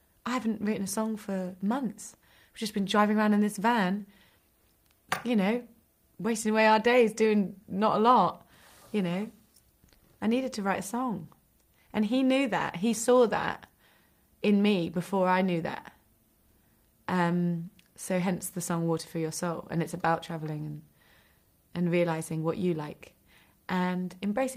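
Nothing in the audio gives any trouble; there's no fault to point to anywhere along the way.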